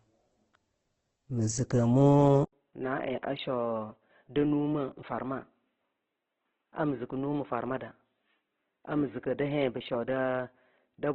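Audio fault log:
throughout: Opus compression, likely. The speech sounds grainy and rough rather than swirly, with nothing above 8.1 kHz. Bands are filled with folded or noisy energy instead of left empty, unlike MP3's warbling holes. The heavy damage fits a rate near 12 kbps in music mode.
2.45–11.14 s: input switched to a poorer device, likely. After an 80 ms silence the sound turns dull and boxy, with nothing above 3.8 kHz, about 10 dB quieter, over a faint new noise floor. The step change in tone, level and noise, rather than gradual filtering, marks a device change.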